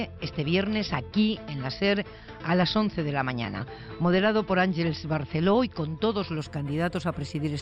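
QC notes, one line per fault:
6.39–7.61 s, imaging from linear upsampling: the top end dulls and a faint metallic shimmer rides on sibilant and bright sounds. The audio was carried at a low rate, which fits a 12 kHz source, and raised to what sounds like 48 kHz by joining samples with straight lines. That weak filter softens content near 6 kHz and leaves a mirrored copy of the band between 6 and 12 kHz, roughly 25 dB down.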